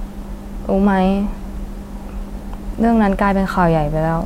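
No technical faults can be heard anywhere in the speech. Nothing in the recording calls for a timestamp or a fix.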